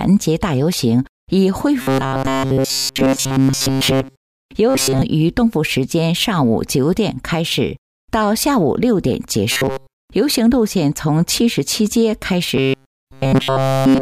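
Robotic sound from repeated short buffers shows up at 1.81–4.41 s, 4.69–5.02 s, 9.52–10.03 s and from 12.57 s to the end, a rigid metallic buzz at 134 Hz. That's likely a roughly 7.5 ms chunk looping while fresh audio is late, nearly all of each stretch replaced, about 70% in the second.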